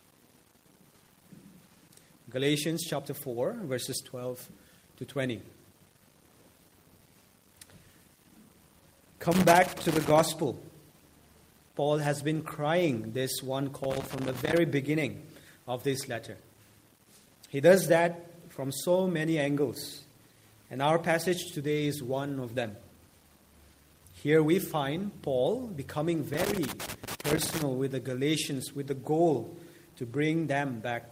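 Loose connector crackle at 9.32 to 10.20 s, 13.84 to 14.58 s and 26.34 to 27.62 s: a worn contact intermittently breaks the signal, producing irregular scratchy bursts.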